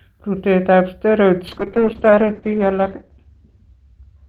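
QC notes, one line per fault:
1.49 to 4.28 s, call bitrate drop: the encoder's rate falls from 32 kbps to 8 kbps, holding at its lowest for 1.19 s, and the coded bandwidth narrows from 20 kHz to 8 kHz. With a quarter of the bits, the speech is quantised far more coarsely, giving a rough, watery texture, while the lost highs above 8 kHz leave it muffled and dull. The quality has not come back by the end of the clip.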